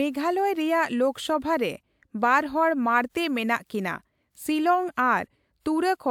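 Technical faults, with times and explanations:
No technical faults can be heard in the speech. Nothing in the recording calls for a time or an explanation.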